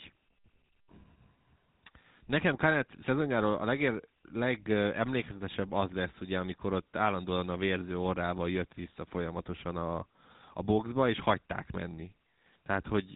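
A buzzy, gravelly roughness runs through the whole speech recording, and nothing is heard above about 3.8 kHz. This is the GSM full-rate codec: it rebuilds the voice from a vocal-tract model excited by sparse regular pulses, and at what sounds like 13 kbps the damage is plainly audible.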